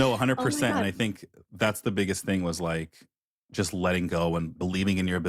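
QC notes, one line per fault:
No faults found in this speech recording. Nothing needs flagging at any point in the clip.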